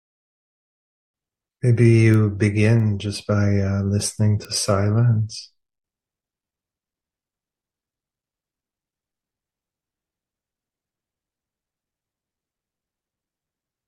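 A single bit flipped in one sample, at 2.80 s and again at 4.45 s, is a bit error spike: the value leaps by a power of two and snaps back. Each is a sharp broadband tick unrelated to the sound, reaching about -25 dBFS, then a louder about -13 dBFS.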